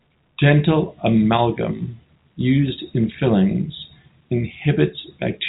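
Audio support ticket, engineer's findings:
No audible faults found.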